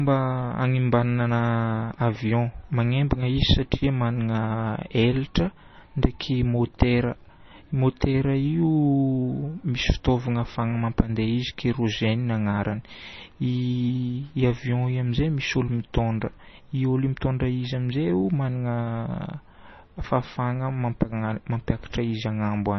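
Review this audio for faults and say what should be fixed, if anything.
The speech has heavy MP3 compression damage throughout. Nothing is present above about 5.9 kHz, so the top end sounds dull. Weak frequency lines drop in and out from frame to frame. That gives a watery, swirling texture and metallic chirps on s sounds. Consonant attacks are smeared. The damage most likely comes from encoding at a very low bitrate; it fits something near 24 kbps. Keep the original file, or re-encode from it at a much higher bitrate.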